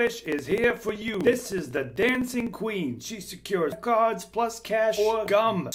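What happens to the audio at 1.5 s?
At 1.5 s the audio falls within a run of periodic USB or driver dropouts lasting from 0.07 to 2.59 s. Something stalls the audio path about every 63 ms, and roughly a millisecond of signal is skipped outright rather than filled with silence, so the waveform jumps and leaves a small tick. The result is a steady train of clicks near 16 per second, heard only where there is signal. That strict regularity separates it from random crackle or isolated glitches.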